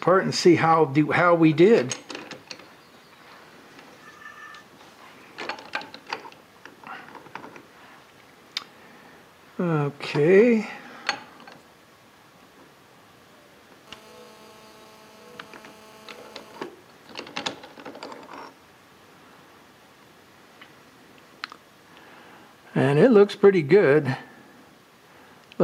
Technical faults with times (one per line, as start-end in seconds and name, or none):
13.87-16.67 GSM phone buzz